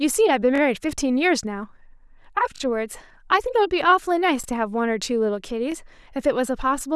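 Repeated buffer stutters at 0.56–0.60 s and 2.56–2.60 s (chunk played twice more), then 4.44–4.46 s and 5.72–5.74 s (once more). Late audio made the device replay its last 21 ms chunk, which fits a 512-sample buffer, so you hear a hard-edged stutter.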